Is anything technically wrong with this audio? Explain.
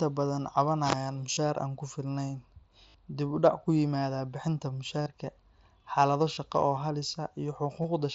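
Yes. The speech has concealed Bluetooth headset packet loss at 1.33–1.37, 2.88–2.95, 5.02–5.06, 6.35–6.37 and 7.82–7.84 s. Headset packets went missing, and the phone filled each gap by repeating recent waveform. The 60 ms gap at 2.88 s gives a held buzzy tone. The shorter gaps are brief buzzes, each with a slight warble as the real speech resumes.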